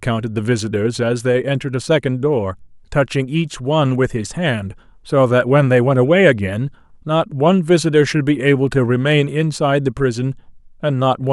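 Speech with clock slip clicks from 0.16 s to 11.29 s: faint regular ticks about every tenth of a second, likely single-sample slips from unsynchronised clocks a few hundred ppm apart.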